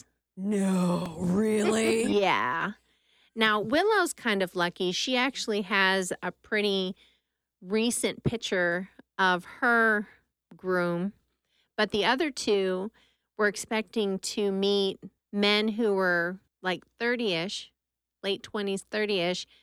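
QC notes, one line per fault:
1.06 s, repeated buffer: a single click in the speech, where a piece about 2.9 ms long plays twice with a hard join. Fresh audio arrived late, so the device replayed its last buffer, which fits a 128-sample buffer, and roughly 3 ms of speech is lost.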